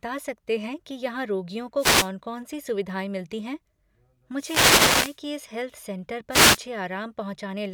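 The first wireless microphone noise hit comes at 1.77 to 2.10 s, after "हैं कि यहाँ रोगियों". The FM radio link fades as reflections cancel. Receiver noise swells as a swish of static over the speech. Two more follow: 4.36 to 5.19 s, before "कि इस हेल्थ सेंटर", and 6.30 to 6.59 s, just after it.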